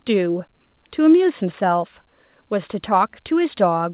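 No faults are audible: the speech arrives over a call path band-limited to 4 kHz, which points to G.711 A-law at 64 kbps, with that codec's normal coding noise and nothing further.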